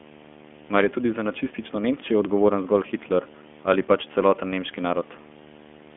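From start to finish there's a video or display buzz sitting under the speech, a steady 75 Hz hum-like buzz with a fizzy hash riding on top of it, roughly 20 dB below the speech. That's a monitor or video cable coupling its field-rate energy into the audio line. At 75 Hz it's a bit higher and edgier than ordinary mains hum, which points to a display refresh rather than the power supply.

The whole clip has also been through the iLBC codec, and the damage is plainly audible. The speech is boxed into a phone band of roughly 200 Hz to 3.4 kHz, with nothing at all above 3.7 kHz, so it sounds thin and muffled at the top. The roughness and slightly synthetic, buzzy texture come from each short frame's excitation being coded on its own, which fits 20 ms frames at 15.2 kbps.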